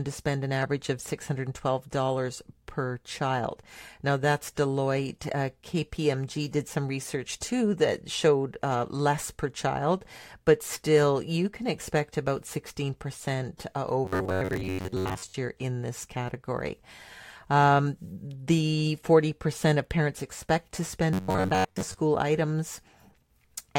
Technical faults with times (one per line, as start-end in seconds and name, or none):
14.05-15.34 robotic sound from repeated short buffers
21.13-22.00 robotic sound from repeated short buffers